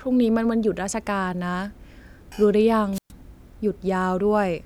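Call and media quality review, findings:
Wireless microphone squelch dropout, 2.93 to 3.12 s. Short burst of hiss, then a hole of near silence of about 120 ms before the speech comes back. Probable component: analogue FM radio mic link and receiver. Mechanism: RF signal fades, receiver squelch mutes the output. Worth checking antenna placement, line of sight and receiver squelch threshold.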